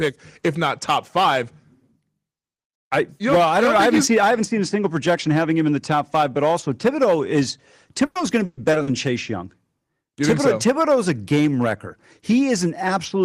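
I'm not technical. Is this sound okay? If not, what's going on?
No. From 8.05 to 8.89 s the speech turns choppy and robotic. This is repeated packet loss (robotic sound): pieces of the audio went missing four times in quick succession, and each time the system covered the hole by stretching out the sound just before it. About a third of that stretch is this patched-in filler, and the longest hole is 120 ms. Unlike a single brief dropout, the holes cluster together, which gives the choppy, stuttering quality.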